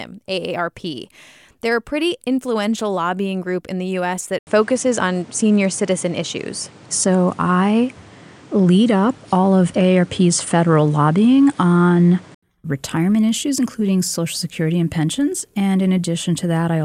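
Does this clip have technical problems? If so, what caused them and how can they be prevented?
Yes. From 4.39 s to 12.43 s the speech turns duller, with nothing above 10.5 kHz. There is a gap of 80 ms at the switch. A new background noise sits roughly 30 dB below the speech. The level also shifts by a few decibels. At 12.43 s the fuller sound returns. This is likely an input switched to a poorer device, a narrower-band microphone with its own tone and noise. To prevent it, lock the recording input to one microphone and disable automatic device switching.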